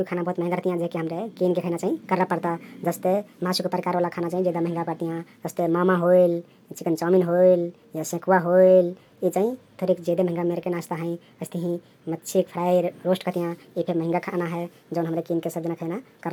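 From start to finish, the recording is being played back faster than it was captured, with no rate conversion in between. The ratio points to 32 kHz audio running out at 44.1 kHz. This wrong sample rate speeds everything up by a factor of 1.38 and raises the pitch by 5.55 semitones at the same time. The speech comes across as hurried and unnaturally high, with the characteristic squeaky, chipmunk-like lift that pitch and tempo rising together produce.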